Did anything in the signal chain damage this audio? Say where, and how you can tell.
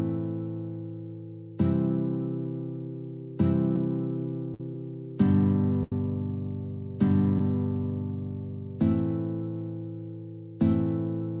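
Yes, at the network stage. Short concealed packet loss appears at 3.76 s and again from 7.38 to 7.40 s, each a brief smear or wobble where roughly 10 ms of audio went missing. The decoder bridged each gap by extending the preceding sound. Because each event is only a few hundredths of a second, the flow of sound carries straight on.

Two bursts of packet loss, from 4.54 to 4.75 s and from 5.83 to 5.92 s, are also network damage but more severe. Each leaves a held buzz or fading hiss lasting 50 to 80 ms, and when the audio resumes, about 50 to 70 ms of material is gone. That lasting gap distinguishes these bursts from the short concealed losses. The cutoff at 4 kHz, consistent with G.711 at 64 kbps, comes from the call codec, not from packet loss.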